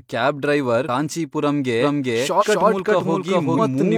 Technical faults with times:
0.84-0.89 compressed frames skipped
1.81-3.97 doubled audio track
2.37-2.44 compressed frames skipped
3.53-3.59 compressed frames skipped

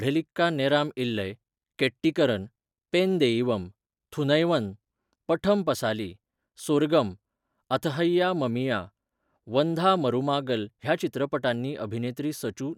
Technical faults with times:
none

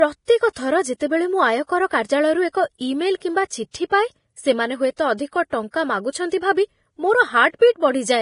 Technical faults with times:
0.00-8.22 low-bitrate audio saved at a high bitrate

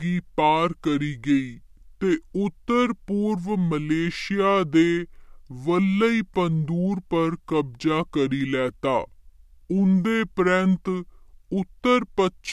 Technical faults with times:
0.00-12.53 wrong sample rate

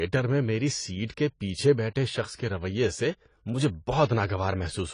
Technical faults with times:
0.00-4.94 AAC compression
4.05-4.09 pre-echo

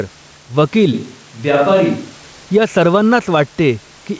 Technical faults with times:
0.00-4.19 gain pumping

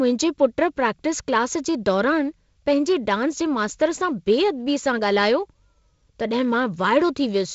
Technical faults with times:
none

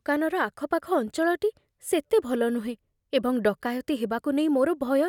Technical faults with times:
none

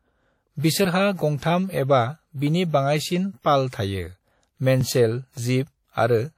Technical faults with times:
0.00-6.37 WMA compression

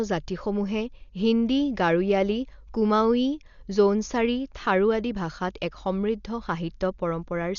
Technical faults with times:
0.00-7.59 Dolby Digital compression

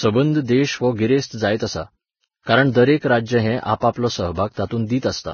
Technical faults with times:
0.00-5.34 Vorbis compression

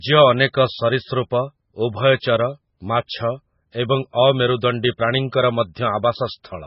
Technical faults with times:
0.00-6.66 MP3 compression

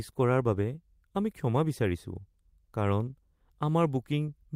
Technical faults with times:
none

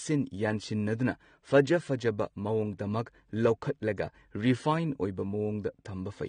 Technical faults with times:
0.00-6.28 AAC compression

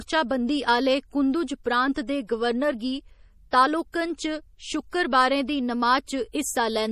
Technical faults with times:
0.00-6.92 MP3 compression
1.94-2.08 pre-echo
3.51 pre-echo
3.92 pre-echo
6.06 pre-echo

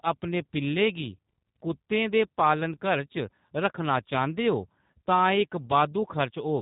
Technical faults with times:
0.00-6.61 G.729 codec

